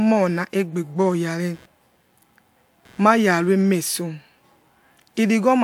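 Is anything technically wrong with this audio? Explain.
Yes. Throughout the speech there is a faint buzzing, chirping texture, pulsing at roughly 150 times per second and sitting around 35 dB below the voice. It shifts and flickers on its own schedule rather than following the speech, which marks it as computer activity noise. Changing load on the processor, graphics card or mouse pulls current through a ground shared with the audio circuitry, and those fluctuations leak into the recording as this low, restless interference.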